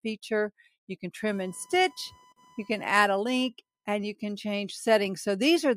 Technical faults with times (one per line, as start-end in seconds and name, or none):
1.25-3.88 computer activity noise